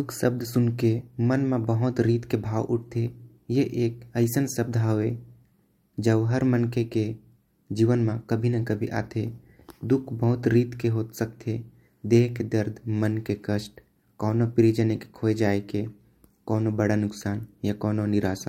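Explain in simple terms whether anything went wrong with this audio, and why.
Nothing went wrong here: no technical fault can be heard anywhere in the speech.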